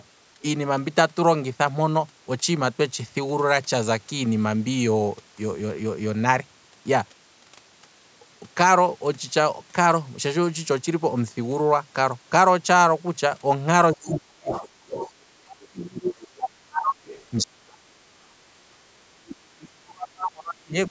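In the last seven seconds of this speech recording, the talker's voice repeatedly sinks or breaks up, falling by roughly 30 to 35 dB at its deepest, at 13.93 to 14.97 s, 15.3 to 17.02 s, 17.41 to 18.46 s and from 19.1 s to the end. This is likely speech suppressed in double talk: with both sides speaking at once, the echo canceller mistook the talker for loudspeaker echo and attenuated them. Interleaved with these drops, a second voice leaks through at 14.51 to 15.12 s, 15.62 to 15.68 s, 17.06 to 17.24 s and 19.29 to 19.36 s, sitting well below the talker, from roughly 10 dB down to about 30 dB down. It is likely the other side's voice leaking through from the loudspeaker, residual echo that the canceller failed to remove from the microphone signal.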